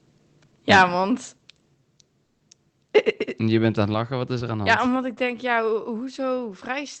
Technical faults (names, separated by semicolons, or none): microphone overload; microphone volume stepped down; call audio freeze